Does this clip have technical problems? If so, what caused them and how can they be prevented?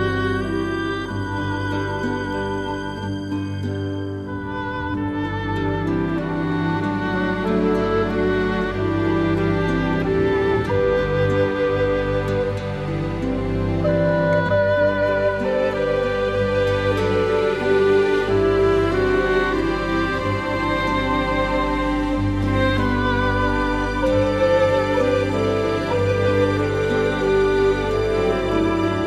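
No, there are no technical problems to report.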